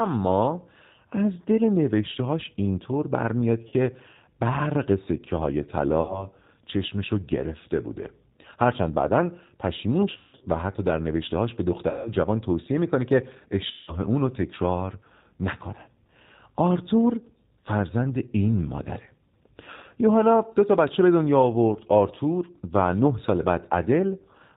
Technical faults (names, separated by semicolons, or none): G.729 codec; VoIP packet loss concealed by the speech codec